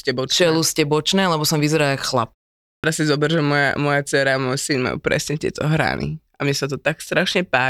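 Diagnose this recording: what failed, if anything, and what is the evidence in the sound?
The playback stage failed: a clipped start after a pause. After a pause of about 0.39 s, the speech resuming at 2.65 s is missing its onset, with roughly 187 ms swallowed up to 2.84 s, so the first sounds snap in abruptly from silence. The output device dropped into an idle state during the gap and needed that long to wake and lock before passing audio. On a waveform the envelope jumps from silence straight to speech level with no attack; a spectrogram shows a hard vertical edge instead of a gradual onset.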